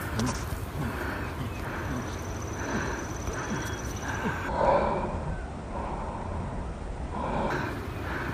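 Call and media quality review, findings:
Section at the wrong speed, 4.49–7.50 s: sound drops to 0.6x speed, pitch roughly ten semitones lower; likely clock mismatch in playback. Spectrogram shows harmonics compressed downward, stretched waveform.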